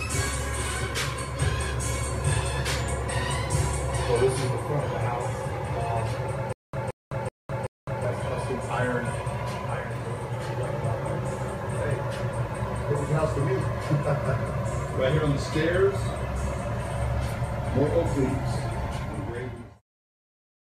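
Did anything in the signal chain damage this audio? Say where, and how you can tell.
Yes: the playback stream likely stalled between 6.53 and 8.05 s, replaying its last buffered fragment on each retry. This causes stutter with silent gaps: a 172 ms burst repeats four times, each followed by about 208 ms of digital silence, every 380 ms, and the audio due in that span is lost.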